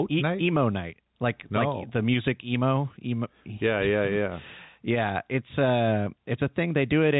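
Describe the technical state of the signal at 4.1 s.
At 4.1 s there's gain pumping, and it runs through the whole clip. The gain sounds set too hot, likely with a fast limiter clamping each loud syllable, so the gain swings roughly 5 dB and loud and soft parts are squashed closer in level.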